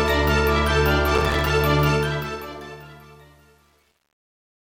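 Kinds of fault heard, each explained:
Processor overload crackle: from 1.15 to 1.5 s, many short buffers miss their deadline and drop to silence, giving a gritty crackling tear. The gaps fit a buffer of about 3 ms.
Truncation distortion on a fade: from 1.89 s to the end, the fade-out keeps only 9 bits without dither, so the quiet tail turns stepped and gritty, worst from 2.52 s.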